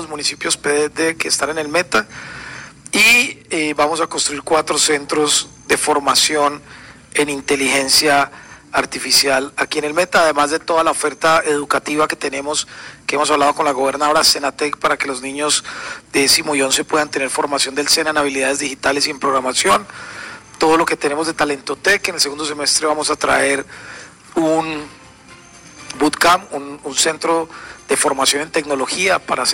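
From start to finish there's hard clipping: the signal was pushed about 12 dB past what some stage could pass, so about 3% of the samples get sheared flat. Those squared-off tops spray high harmonics, giving a harsh fuzz on every loud moment.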